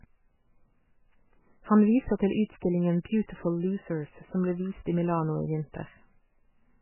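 Speech runs through the whole clip with a dull, watery, swirling quality, likely from heavy MP3 compression at a very low bitrate, around 8 kbps. Nothing survives above 3 kHz. A spectrogram shows a flat ceiling there and blotchy, flickering patches below it as weak frequency lines drop in and out.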